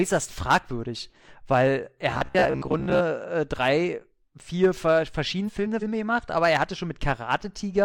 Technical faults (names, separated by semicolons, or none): robotic sound from repeated short buffers; frames out of order